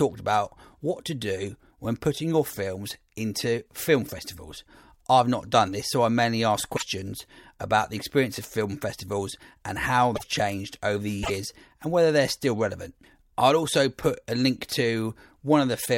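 A broken MP3 bit reservoir is the likely cause of brief glitches in this speech clip at 6.75–6.82 s after "so I mainly ask", 10.15–10.23 s before "changed over the", and 11.22–11.31 s before "and whether they're still". Frames seem to be missing, so the following roughly 26 ms frames borrow bytes from the wrong data, producing a skip and a short chirp, burst of noise or gap.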